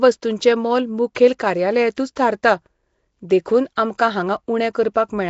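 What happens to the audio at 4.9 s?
At 4.9 s it's the same rough, hissy, underwater smear heard throughout, likely Nellymoser compression: coarse blocks, starved bands noise-filled, nothing above 7.7 kHz.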